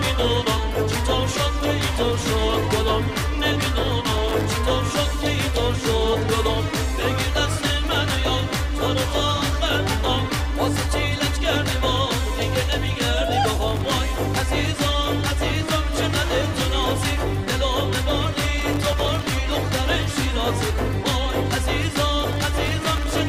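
Processor overload crackle at 4.06–4.45 s, 13.68–14.00 s, 18.58–19.29 s and 22.32–23.19 s: the processor misses dozens of sub-millisecond buffer deadlines in a row, and each miss leaves a hard-edged silent gap. The gaps pile up into a gritty crackle that rides on the sound.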